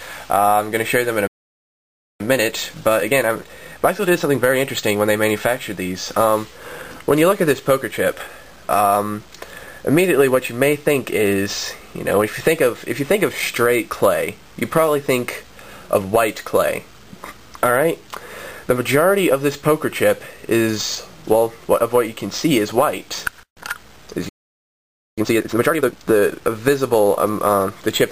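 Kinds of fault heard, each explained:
Playback stall: The audio cuts out mid-flow twice, silent from 1.27 to 2.20 s (about 0.93 s) and again from 24.29 to 25.18 s (about 0.88 s). The likely cause is the player running dry of data or its thread getting blocked.
Time-compressed catch-up: Right after each stall, the player trims its backlog by splicing out tiny chunks and cross-fading the joins. From 2.20 to 5.20 s it runs about 1.15 times fast, and from 25.18 to 26.06 s it runs double speed, rushed but at normal pitch.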